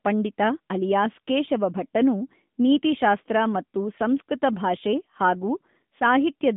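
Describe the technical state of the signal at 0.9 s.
At 0.9 s the speech is passing through the AMR narrowband mobile codec, as it does for the whole clip. The voice is rebuilt from a vocal-tract model in the 10.2 kbps mode, and the line confines it to roughly 150 Hz to 3.6 kHz, with nothing above 3.8 kHz and plainly audible coding damage.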